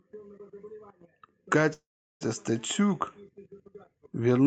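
Speech, carried over a call path whose top end stops around 8 kHz, with a call audio freeze from 1.73 to 2.23 s. There's a short buzzy tail that fades into about 0.37 s of silence, then the speech picks up right where it left off, with nothing lost, just everything after it pushed back by about 0.47 s. Likely the packets got held up in transit and the jitter buffer ran dry.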